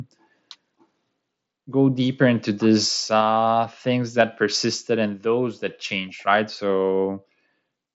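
At 3.21 s, right after "go deeper into these", the speech and background drop about 3 dB in one step, then again about 2 dB at 4.23 s, just before "persisted and those that": a microphone volume stepped down, likely the call software trimming input gain. The whole thing sits under an mSBC headset band topping out near 7.7 kHz.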